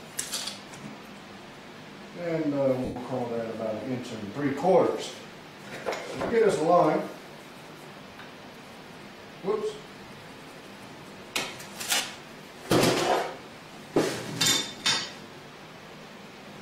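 Lost LE Audio frames at 2.85 s (110 ms), 6.20 s, 10.02 s, 11.96 s and 14.78 s (40 to 50 ms, some scattered) leave the LC3 decoder repeating spectra, smearing tones into noise.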